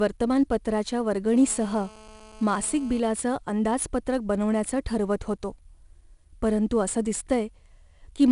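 From start to end, the speech carries 4-bit ADPCM compression. Each sample is coded as a coarse step from a predicted value, and the step size adapts as the signal moves. The error rides some 20 to 30 dB under the speech and rises and falls with it. It is plainly audible as a gritty hiss on louder syllables. Sharp onsets sound rough, because the step cannot grow fast enough. Nothing is heard above 10.6 kHz, which fits a low sample rate and a bitrate near 88 kbps.

From 1.36 s to 3.00 s, a GSM phone buzz sits over the speech. A nearby 2G phone on a call sends radio bursts 217 times a second. The audio circuit rectifies those pulses into the signal. The result is a hard, raspy buzz at 217 Hz with many harmonics. It stays nearly steady, as expected during a call. It sits about 24 dB below the speech and ignores what is said.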